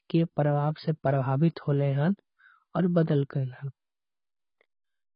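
Throughout, the speech sounds dull and smeared, with nothing above 5.2 kHz and a fizzy warble, likely from heavy AAC compression at a very low bitrate, near 16 kbps.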